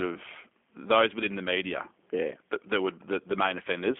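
Throughout, the speech sounds slightly rough and synthetic, with nothing above 3.8 kHz, the mark of the G.729 codec rebuilding each 10 ms frame at 8 kbit/s.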